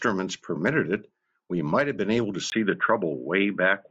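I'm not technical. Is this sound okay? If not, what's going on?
No. At 2.5 s there's a tiny gap, then the speech turns dull and boxy through to the end, with the top end cut off above about 3.8 kHz. Loudness stays about the same, with faint new background noise. This is likely an input switched to a poorer device, such as a headset.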